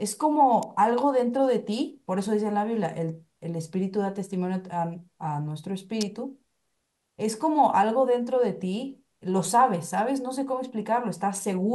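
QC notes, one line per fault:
0.63 s and 6.01 s, electrical switching spike: each is a sharp snap laid over the speech, with the one at 6.01 s a good deal louder, reaching roughly -10 dBFS against roughly -20 dBFS for the first. The likely cause is a nearby switch, motor or static discharge arcing briefly and coupling into the audio line. On the waveform each shows as a narrow spike, about 2 ms and 14 ms long respectively, and on the spectrogram as a thin vertical stripe running across the whole frequency range.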